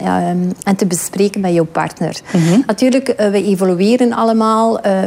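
From 0.96 s to the end, crude rate conversion adds a gritty, inharmonic fizz or buzz roughly 35 dB below the signal. Linear interpolation without filtering, fitting a 44.1 kHz to 48 kHz change, creates shifted copies. It follows loud and high sounds.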